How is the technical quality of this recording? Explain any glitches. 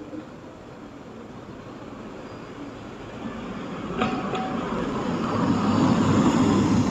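The recording has one clear problem near the end. From 4.74 to 6.88 s, a train of clicks runs at an uneven pace of about 11.3 per second. It is likely caused by electrical interference or a faulty connection injecting repeated pulses. Roughly thirty similar pops tick over the sound, standing around 10 dB above it. A waveform shows sharp spikes, and a spectrogram shows thin vertical broadband lines.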